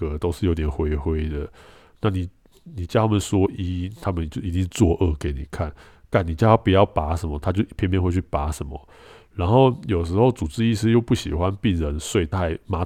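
No technical faults are audible anywhere in this recording.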